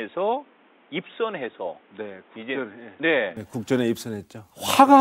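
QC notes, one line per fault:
0.00–3.37 s, input switched to a poorer device. The speech is dull and boxy, with nothing above 3.8 kHz. It is quieter and carries a faint new noise bed. At 3.37 s it opens up abruptly, with no gap, likely the recording returning to the better microphone.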